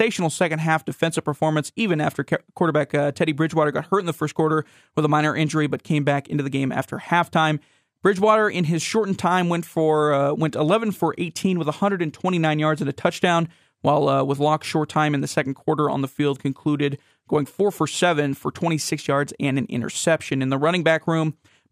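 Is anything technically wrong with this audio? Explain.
No, nothing technically wrong turns up in this speech recording on listening.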